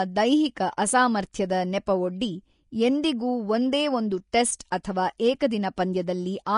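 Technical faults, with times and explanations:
Throughout: Vorbis compression, likely at a low bitrate near 35 kbps. Nothing is left above 10.6 kHz, and the remaining treble is quantised into grainy hiss. Unlike broadband noise, the damage follows the speech, roughening tones and blurring consonant attacks.
4.32, 4.59, 4.71 and 4.83 s: pre-echo. A short hiss of about 11 to 13 ms comes just before each sharp onset, softening it. The codec spread its block's quantisation noise ahead of the attack. Unlike a click or dropout, the smear leads the transient rather than interrupting it.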